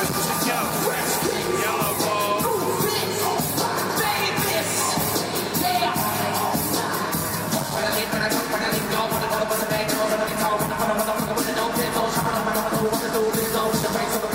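Compressed frames are skipped at 10.27 s, losing about 100 ms (roughly four 23.2 ms frames), and at 11.66 s, losing about one frame. Each jump moves the audio ahead by the length of the missing frames.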